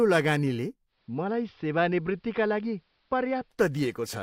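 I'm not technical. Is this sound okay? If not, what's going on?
No. Digital radio blending to analogue from 0.86 to 3.59 s: the radio lost its digital signal and faded to AM, so the speech turns duller, slightly quieter and faintly hissy, then returns.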